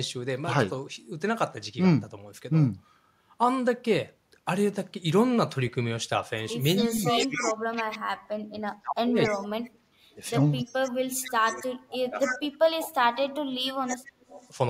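A far-end echo canceller likely let its loudspeaker pickup through, so an echo leak returns a copy of the speech 277 ms late, faint to fairly strong, at 6.76–7.98, 9.23–9.70, 10.58–10.92, 11.6, 12.09–12.38 and 13.87–14.50 s. The same canceller, faced with both sides talking, likely turned everything down: speech suppressed in double talk makes the speech dip very deeply or cut out in pieces, about five seconds in total, between 6.87 and 14.39 s.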